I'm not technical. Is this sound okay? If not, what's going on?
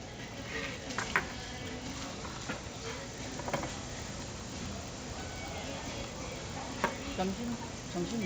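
No. The resampler restarted on every block, from start to finish. The sound was converted from 16 kHz to 48 kHz in separate 20 ms slices, and each slice was treated as if it had nothing before or after it. Every join between slices ends up slightly wrong, so you hear a tick 50 times a second, blurring into a low buzz. It is only there while something is sounding.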